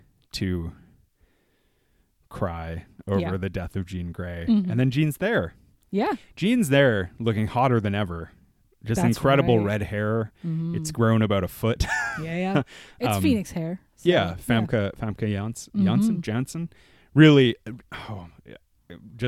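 No technical faults can be heard anywhere in this speech recording; the signal stays continuous and steady throughout.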